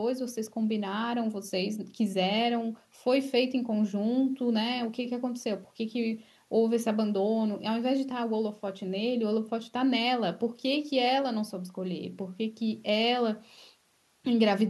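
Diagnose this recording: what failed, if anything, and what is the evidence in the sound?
Nothing in the chain seems to have gone wrong here: the speech comes through steady and intact, with nothing to point at.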